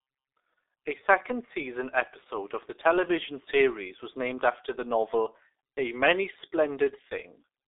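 Speech heard through the G.723.1 codec throughout: muffled, hoarse, consonants smeared by coarse frames. The spectrogram shows an empty band above 3.8 kHz, consistent with roughly 6 kbit/s coding.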